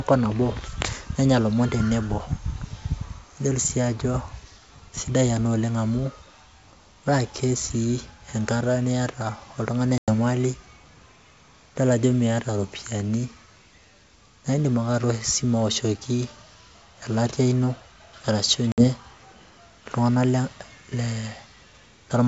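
Speech carried over G.722 wideband telephone coding shows packet loss on an ADPCM call: hard-edged silent holes at 9.98–10.10 s (100 ms lost) and 18.72–18.85 s (60 ms lost). Unlike a plain dropout, the speech resumes slightly distorted, because the decoder's adaptive predictor and step size have drifted from the sender's.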